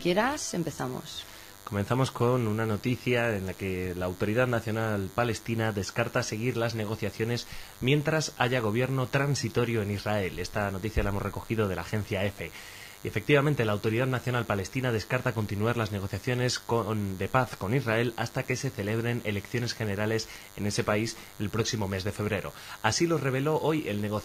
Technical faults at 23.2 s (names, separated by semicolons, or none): DECT cordless phone buzz